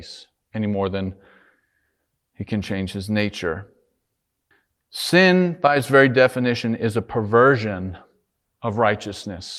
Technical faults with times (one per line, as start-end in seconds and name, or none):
none